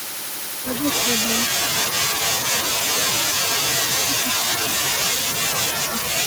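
From 0.56 to 4.94 s, 5.37 to 5.59 s and 5.75 s onward, the speech sinks by roughly 40 dB. The waveform collapses toward flat and the spectrogram darkens. This is likely speech suppressed in double talk, with the echo canceller turning down both its own talker and the loudspeaker echo.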